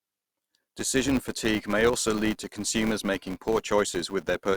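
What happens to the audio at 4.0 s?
At 4.0 s the speech carries a filter restarted on every block fault, present throughout: each block begins from silence, causing a 200 Hz buzz seen as evenly spaced vertical ticks.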